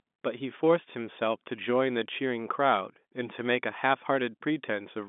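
No technical faults are present: the speech sits in the narrow band of G.711 mu-law telephone coding, running from about 200 Hz to 3.6 kHz with nothing above 3.8 kHz, and any coding grain is faint at most.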